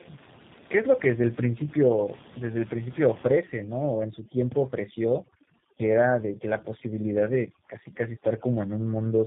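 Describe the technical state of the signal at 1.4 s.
At 1.4 s the speech has tandem speech coding, present throughout the clip. Two low-rate speech coders ran in sequence, the second recoding the first's damage. The result sounds rough, muffled and warbly, with nothing above 3.7 kHz. Room noise sits about 20 dB below the speech.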